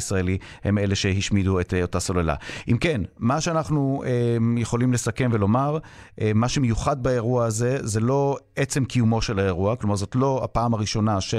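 Nothing in the recording stands out as a technical fault; the speech runs along without any glitch, dropout or distortion catching the ear.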